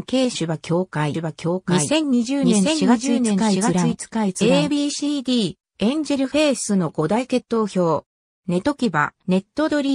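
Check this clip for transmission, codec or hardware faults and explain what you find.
One fault is present. From 1.14 to 4.70 s there is a doubled audio track: a full-band copy trails about 0.7 s behind at roughly equal level, with no decay or room colour, likely from a second capture path or an edit holding two copies out of step.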